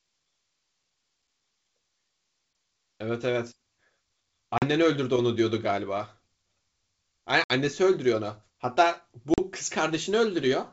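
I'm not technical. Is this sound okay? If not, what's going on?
No. There is packet loss on an ADPCM call, heard three times: at 4.58 s, 7.44 s and 9.34 s the speech drops into sudden silence for about 40, 60 and 40 ms, which points to a couple of lost data chunks each time (three at 7.44 s). The decoder, which predicts each sound from the one before, loses track during the gap. So the speech comes back slightly distorted, then settles within a few tens of milliseconds.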